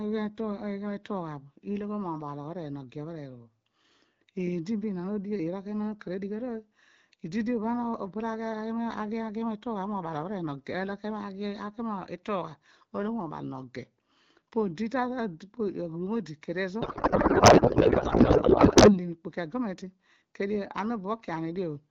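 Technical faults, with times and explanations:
16.81–18.99 s, codec payload misread: the receiver unpacked octet-aligned AMR frames as if they were bandwidth-efficient, so every field landed in the wrong bit positions. The decoder turned them into garbled noise and warble that barely tracks the speech, replacing it for about 2.2 seconds.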